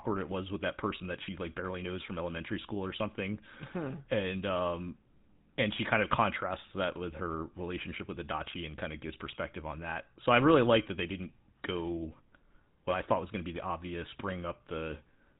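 Across the whole clip, the speech has passed through the GSM full-rate codec, which rebuilds each voice from a vocal-tract model excited by a sparse, regularly spaced pulse train. The damage is plainly audible: a buzzy, gravelly roughness sits on every voiced stretch, and nothing above 4 kHz survives, so sibilants and airiness are gone and the sound is dull and boxy. This fits a 13 kbps full-rate link.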